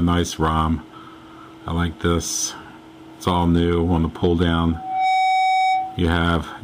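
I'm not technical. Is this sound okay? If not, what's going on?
No. From 4.71 to 6.11 seconds there is loudspeaker feedback squeal. A microphone is picking up the speaker it feeds, and the sound loops around and grows on itself. Here that loop locks onto one pitch, a steady tone near 755 Hz. It swells up over a fraction of a second and ends up a bit louder than the rest of the sound. It stops at 6.11 seconds.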